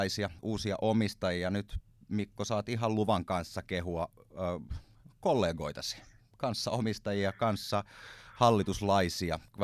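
Nothing stood out on listening to the speech in this recording.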